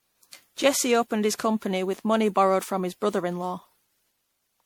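Speech with generation loss throughout: swirly, hollow, smeared consonants, likely from around ten MP3 re-encodes near 96 kbit/s; the spectrogram shows accumulated holes and blurred onsets.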